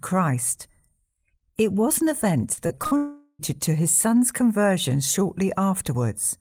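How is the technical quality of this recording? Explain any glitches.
The recording has two connected transmission faults in the middle of the speech, back to back from about 2.53 s to 3.41 s.

Right after "was an", from 2.53 s to 2.93 s, the speech turns choppy and robotic, with small pieces missing. This is repeated packet loss: several short holes, the longest about 41 ms, each patched by stretching the last bit of audio. About a third of that stretch is filled this way, which gives it the stuttering quality.

From 2.97 s to 3.41 s the speech gives way to a smeared buzz that fades, then about 20 ms of silence, before resuming at "to his son's conversion". This sounds like a long network dropout, likely a stall in the incoming stream. The receiver extended the last sound for roughly 420 ms to cover the gap, and the speech in that span was lost.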